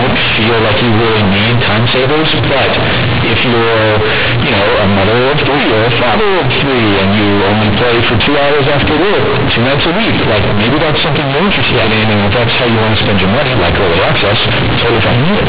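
Companded audio read as linear, throughout: the speech was stored as A-law bytes, but each byte is played as a plain 8-bit sample with no expansion. Sign changes jump across half the range, so the result is harsh, very loud buzzing distortion with heavy noise filling the pauses.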